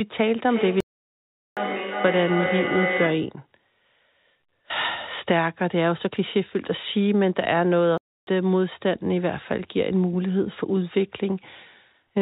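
From 0.45 to 3.44 s, a second device in the same room replays the call and its microphone sends it back, causing feedback echo between two devices: speech returns roughly every 0.4 s, thin and ringing, peaking at about 4 dB below the direct speech. Inside that stretch, from 0.80 to 1.57 s, a playback stall, likely from the player running out of data, cuts the sound to silence for 0.76 s before it resumes. A second stall from 7.98 to 8.27 s breaks the speech off for 0.30 s, all within a narrowband call sound with nothing above 4 kHz.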